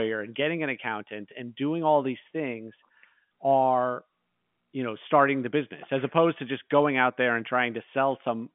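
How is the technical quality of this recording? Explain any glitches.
No glitches or faults can be heard in the recording. The speech comes through G.711 telephone coding, so its sound is limited to the narrow line band from about 150 Hz to 3.4 kHz.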